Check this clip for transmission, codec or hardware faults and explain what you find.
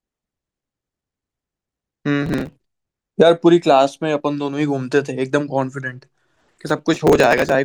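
Two bursts of processor overload crackle, from 2.23 to 2.88 s and from 6.36 to 7.55 s. Dozens of very short buffers, around 1.5 ms each, miss their deadlines and are skipped. The many tiny hard-edged gaps merge into gritty tearing, unlike a single clean dropout.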